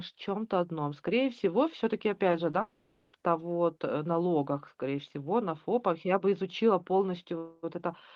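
Around 2.31 to 2.35 s and again at 2.51 to 2.55 s there's short concealed packet loss: about 20 ms of the stream never reached the decoder in time, so it patched each gap by stretching the last sound. You hear it as a quick smear or wobble in the speech.

Right after, from 2.61 to 3.15 s, the sound turns into a drawn-out, fading continuation of itself for roughly half a second before real audio resumes further on. That's most likely a long network dropout, with the receiver filling the whole hole rather than going silent.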